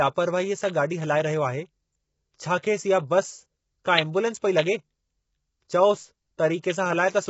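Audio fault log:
throughout: low-delay AAC compression. The speech sounds heavily rough and grainy, likely from AAC-ELD at a low bitrate near 16 kbps. Coarse quantisation at the low bitrate leaves noise between pitch harmonics, so a spectrogram shows noise filling the gaps between harmonics and a hard ceiling with nothing above 7.7 kHz.
6.60 to 6.64 s: pre-echo. A short hiss runs about 37 ms ahead of a sharp attack, softening its onset. Quantisation noise sized for the loud attack spreads across the whole block, so the waveform shows a low noise smear before the transient rather than a clean rise.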